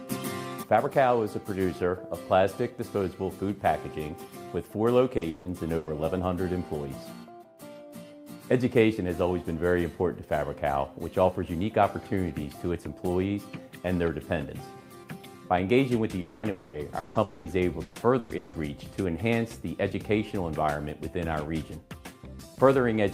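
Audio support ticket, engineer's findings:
Repeated packet loss (robotic sound): choppy stretches at 5.17–5.89 s and 16.43–18.55 s. In the first stretch, 3 gaps fill 300 ms, 42% of the span. In the second, 4 gaps fill 540 ms, 25% of the span. The longest gap in each is 160 ms. Probable component is the network path plus jitter-buffer concealment, which repeats the last audio to cover missing packets. On a spectrogram this shows as smeared, repeated harmonic bands with blocky edges. The waveform shows periodic, looped-looking segments.

Long network dropout: three holes of about 250 ms each, at 16.21–16.46 s, 16.51–16.76 s and 17.23–17.48 s. Each is covered by roughly 220 ms of sustained, decaying buzz or hiss, with no true silence. The likely cause is a network outage, so the receiver extends the last frame until fresh audio resumes. On a spectrogram these look like frozen, flat horizontal streaks that fade. 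The waveform shows a sustained, slowly decaying repetitive pattern.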